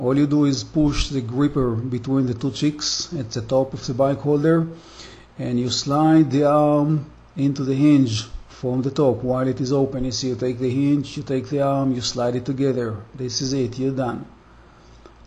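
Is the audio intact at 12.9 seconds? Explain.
Yes, the audio at 12.9 seconds is intact, with no dropout, click, glitch or other technical fault at that moment.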